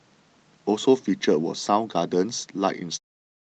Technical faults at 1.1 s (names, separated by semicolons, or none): none